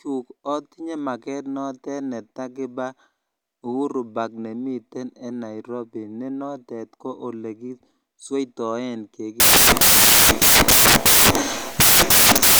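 From 9.4 s to the end at 12.59 s, the speech gives way to loud, hissing broadband noise. These are samples built from the wrong bytes: each value is assembled misaligned or byte-swapped, so the rapidly changing low bits dominate.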